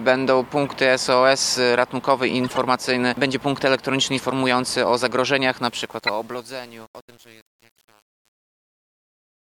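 There's a corrupt frame decoded at 0.66 s, a faint blip, then louder bursts at 2.44 to 2.58 s and 4.15 to 4.20 s. Each is a few frames' worth of bit errors that the decoder played anyway, so energy lands at the wrong frequencies as a short squeak or noise burst. From 5.62 s the fade-out picks up truncation distortion. An 8-bit stage without dither turns the quiet tail into coarse steps, and from 5.73 s to the end it's gritty. Two more corrupt frames land inside that tail: a loud, harsh burst at 6.03 to 6.11 s and a very faint tick at 7.77 s.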